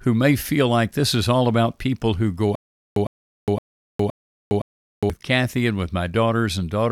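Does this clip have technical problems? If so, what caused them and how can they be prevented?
Yes, a stutter with silent gaps runs from 2.55 to 5.10 s. A 106 ms burst of speech repeats five times, every 516 ms, separated by 410 ms of digital silence. The likely cause is a stalled stream replaying its last buffer on each retry. Unlike plain dropouts, the same fragment comes back each time. Larger playback buffering and a steadier network or decoder supply would prevent it.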